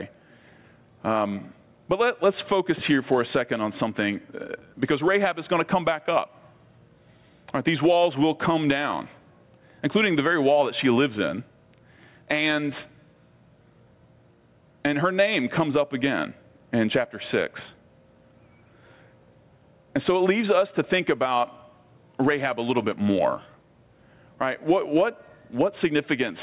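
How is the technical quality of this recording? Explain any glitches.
Gain pumping runs through the whole recording, heard over narrow telephone-band audio with nothing above 4 kHz, which fits a G.711 call path. Throughout, the level swings by something like ten decibels, likely from gain set too high and a fast limiter clamping down.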